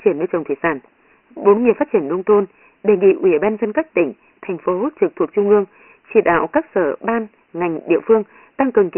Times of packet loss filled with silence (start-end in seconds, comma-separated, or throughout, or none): none